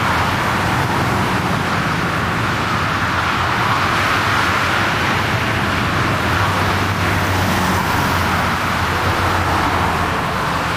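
From start to finish the sounds run fast and sit high, the signature of a wrong sample rate: the samples are being played back faster than they were captured, with no conversion in between. Everything is about 1.38 times too quick and about 5.5 semitones sharp, which fits audio recorded at 32 kHz and played at 44.1 kHz. Unlike a pitch shift or a time-stretch, speed and pitch move together by the same ratio.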